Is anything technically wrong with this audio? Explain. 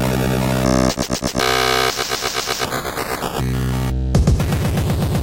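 Yes, there's one glitch. From 2.77 to 2.85 s you get a corrupt frame concealed by the AAC decoder. Some bits in the compressed stream got flipped, the decoder caught the bad data, and instead of playing garbage it papered over the gap itself, either muting it or reusing a sign-scrambled copy of the last good spectrum. The concealed stretch lasts roughly 80 ms, which fits about three damaged frames.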